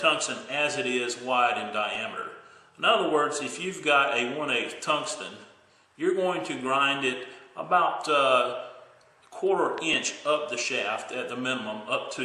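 An overlap between stream segments, four-second chunks whose time stamps collide, makes the player trim away sound that was never actually doubled. A few milliseconds disappear and the waveform jumps, heard as a brief click or skip at about 1.95 s and 9.94 s. A loud pop, likely from a plug, switch, static discharge or driver glitch injecting a voltage spike into the audio path, lands at 9.78–9.80 s, about 10 dB above the signal, and again at 10.59–10.61 s, about 5 dB above it. Each is a single sharp pop riding over the audio, which continues underneath.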